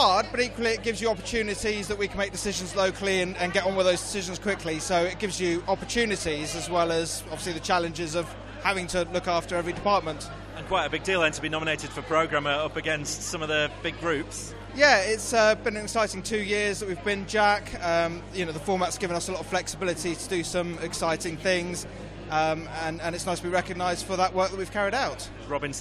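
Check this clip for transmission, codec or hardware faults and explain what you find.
One hardware fault runs through the whole clip. Mains hum is present from start to finish: a ground loop or nearby transformer is leaking the 50 Hz power supply into the signal path. It is heard as a steady low drone with some low harmonics, sitting only about 15 dB below the sound.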